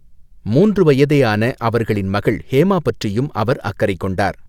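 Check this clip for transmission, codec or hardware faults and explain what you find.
Nothing stood out on listening to this speech recording.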